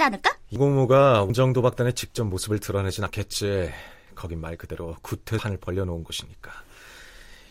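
At 0.56, 1.3, 3.07 and 5.39 s the speech jumps forward, losing roughly a third, a fifth, a tenth and a third of a second: likely a dropped buffer (overrun), joined without the silent gap of an underrun.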